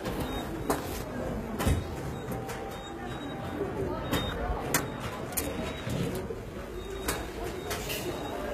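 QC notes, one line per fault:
Throughout: HE-AAC compression, likely the cause of the plainly audible damage. Treble above the coded band sounds synthetic, gritty and metallic, as if copied up from lower bands, and nothing reaches past 14.9 kHz, which fits a low bitrate around 20 kbps.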